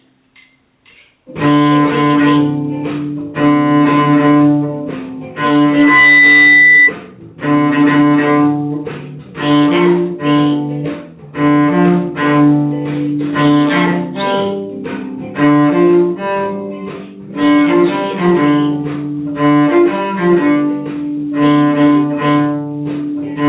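Loudspeaker feedback squeal, 5.69 to 6.93 s: a microphone picks up the loudspeaker it feeds, and a 2 kHz tone swells within a third of a second, rising above the sound.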